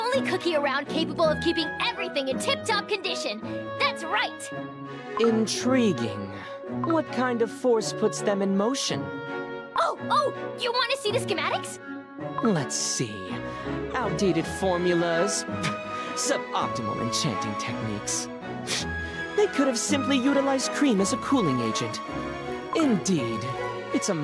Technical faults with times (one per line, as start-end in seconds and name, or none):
20.80-23.80 resampler restarted on every block